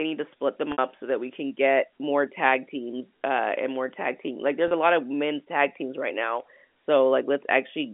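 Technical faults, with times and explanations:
0.72 s and 4.68 s, packet loss with pitch repetition: about 60 ms lost after "need to split them" and 30 ms before "a lot of men's". Repeating the last pitch period bridges each gap, giving a brief held, buzzy sound at 4.68 s, while the longer first gap fades into silence before the speech returns with a short cross-fade.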